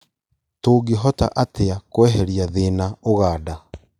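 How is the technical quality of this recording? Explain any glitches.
There is one glitch in the speech: a single loud pop at 2.08 to 2.10 s. It is a short, sharp burst that peaks a few decibels above the speech level while the speech continues beneath it. The likely cause is a sudden voltage step or pulse, from a plug, switch, static discharge or driver glitch, that was added to the signal and then shaped by the downstream circuitry. On the waveform it appears as a narrow spike standing above the surrounding envelope, and on a spectrogram as a thin vertical stripe spanning the full frequency range.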